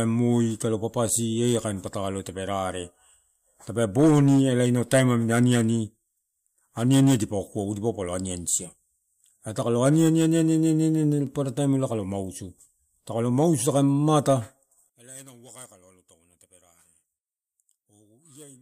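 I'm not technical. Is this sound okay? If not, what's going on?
No. From 14.90 s to the end, the speech nearly vanishes, leaving a faint trace rather than silence, most likely one channel inverted, cancelling when both channels combine.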